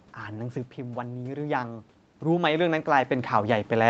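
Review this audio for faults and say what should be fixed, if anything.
Automatic gain rising from 0.32 s to the end. The input dropped by about 9 dB, so the gain control slowly lifted voice and room noise together. Keep the talker at a steady distance, or use a faster, gentler gain control.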